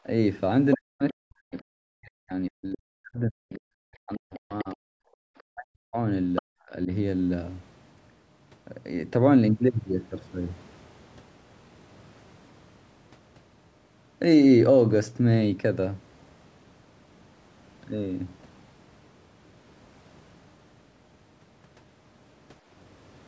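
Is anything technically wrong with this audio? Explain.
Yes, two faults appear in this speech recording.

Other side's voice leaking through: brief scraps of a second voice at 0.71–0.75, 1.09–1.13, 4.34–4.64, 5.38–5.43 and 6.35–6.42 s, from about 10 to 40 dB below the speech. These are likely loudspeaker echo that the canceller left behind. On a spectrogram they show as harmonic fragments.

Speech suppressed in double talk: the talker's level collapses, by as much as about 40 dB, from 0.75 to 4.95 s, 5.48 to 5.97 s and 6.41 to 6.90 s. This is likely the echo canceller ducking everything while both sides spoke. The waveform shows hollowed envelopes where the level dips.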